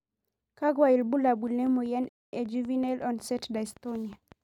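From 1.28 s to 4.33 s a steady ticking runs over the speech, around fifteen sharp, similar clicks at a regular 5.4 per second, roughly as loud as the speech itself. This train of clicks most likely comes from electrical interference or a faulty connection or power supply.

At 2.09 s the speech drops to silence for 0.24 s and then picks up again exactly where it stopped, at 2.33 s. This rebuffering stall happened because the player ran out of downloaded audio and waited for more. Nothing is lost, but 237 ms is added.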